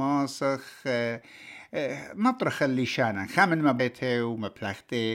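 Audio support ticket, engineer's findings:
Likely stream segment skipped: one segment failed to load, player moved to the next. Speech jumps ahead at 3.79 s with a small blip; a stretch of programme missing.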